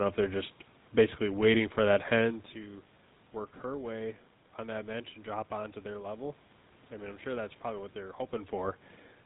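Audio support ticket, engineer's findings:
GSM full-rate codec, throughout: buzzy, gravelly roughness on speech, nothing above 4 kHz, fits 13 kbps full rate. Unlike plain band-limiting, the coarse pulse excitation adds grit. Level changes near 2 s and 8 s are talker movement.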